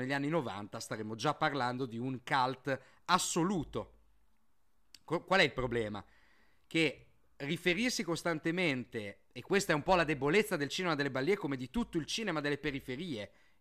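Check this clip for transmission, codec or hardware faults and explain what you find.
Nothing stood out on listening to the speech in this recording.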